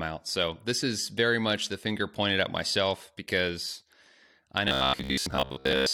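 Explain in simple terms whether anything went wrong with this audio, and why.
Robotic sound from repeated short buffers, 4.68 to 5.92 s: the speech becomes a metallic 67 Hz buzz, likely because most of the audio was replaced by looped snippets of about 15 ms.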